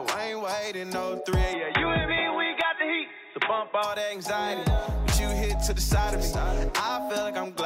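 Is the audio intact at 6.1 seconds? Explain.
Yes, the audio is intact at 6.1 seconds, with no dropout, click, distortion or other fault audible at that moment.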